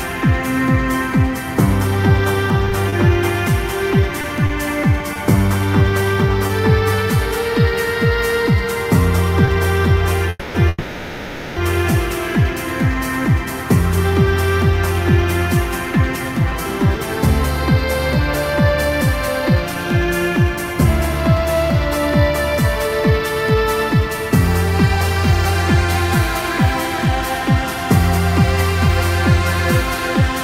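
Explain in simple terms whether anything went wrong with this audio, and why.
Between 2.65 and 6.51 s there are scattered short gaps. About seven small pieces of the sound went missing on the way. The receiver covered each hole by carrying on the last bit of sound. The longest patch is roughly 30 ms, and only around 3% of that stretch is patched. You hear brief ticks or small smears, but the sound stays clear.

At 9.45 to 9.50 s there is a short stall from a late packet. One piece of audio arrived too late. The receiver held the last sound for 20 ms while it waited, then carried on from the same spot. Nothing is lost. One moment just lingers a little too long, with a slight buzz or dip.

Two longer hold-ups follow, each heard as a call audio freeze. The first runs from 10.29 to 10.57 s and lasts 250 ms. The second runs from 10.68 to 11.59 s and lasts 880 ms. The sound stops moving forward and turns into a fading buzz or hiss. 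Then it picks up exactly where it left off. The likely cause is packets stuck in the network, which left the receiver with nothing to play.

From 15.4 s to 30.2 s there is a jitter buffer speed-up. The receiver had more audio stored than it wanted. It trimmed tiny slices many times over, about 0.4 s in total. The sound plays about 3% faster, but the pitch stays the same. It is too small a change to sound hurried.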